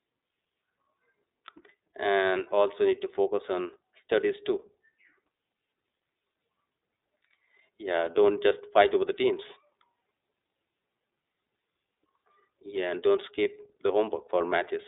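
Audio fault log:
throughout, iLBC codec: The speech is confined to a telephone band of roughly 300 Hz to 3.7 kHz, with nothing above 3.8 kHz, so it sounds thin and muffled. The codec builds each frame's excitation on its own, without carrying over from the previous frame, and the plainly audible damage fits 30 ms frames in the 13.33 kbps mode. The result is a rough, slightly synthetic texture on top of the narrow band.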